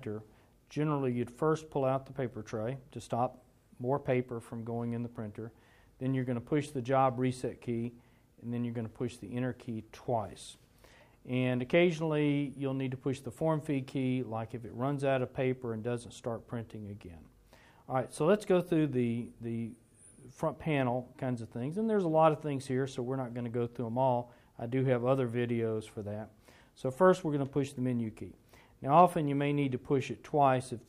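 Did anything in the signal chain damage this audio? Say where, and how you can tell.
No, nothing along the chain from capture to playback left any damage you can hear in this one.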